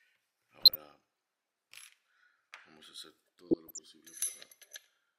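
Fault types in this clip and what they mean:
DAB burbling: Weak digital radio reception lets bit errors slip past error correction into the MP2 data. Corrupted samples put short noise blips in single sub-bands, and corrupted scale factors make sub-bands leap in level for up to a frame. Here it occurs from 0.61 to 0.75 s and 3.51 to 3.79 s.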